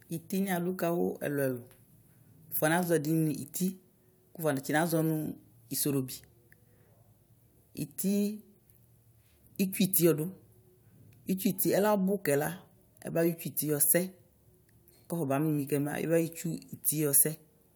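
No technical faults can be heard anywhere in the recording, and the signal stays steady and intact throughout.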